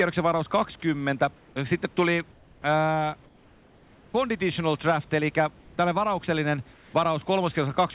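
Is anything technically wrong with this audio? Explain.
Yes. Comfort noise in place of the background is heard at 1.36–1.56, 2.32–2.64, 3.24–4.14, 5.6–5.78 and 6.74–6.94 s. The sender likely stopped transmitting during pauses, and the receiver filled them with synthetic noise. The room background, about 30 dB below the speech, turns into a flat, featureless hiss about 2 to 4 dB quieter.

Onsets clipped by the voice detector occur at 1.54–1.56 s, just before "sitten tuli ää", and at 2.62–2.64 s. In each case the detector likely missed the first 20 ms of sound, so comfort noise covered it and the sound begins abruptly, without its soft attack, over the narrowband call audio that stops at 4 kHz.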